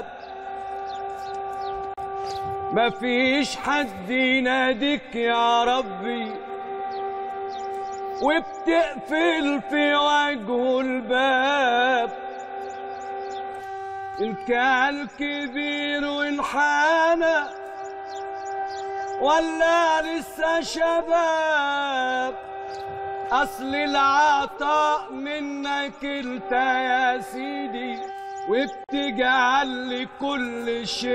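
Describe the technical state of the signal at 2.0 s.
A gap at a join of encoded pieces sits right before this point, from 1.94 to 1.98 s, so at 2.0 s the sound has only just resumed. Two separately encoded segments were butted together without trimming, leaving the encoder's start-up delay and final-frame padding in place as roughly 37 ms of silence. The dropout has smeared edges, and the sound then picks up exactly where it broke off.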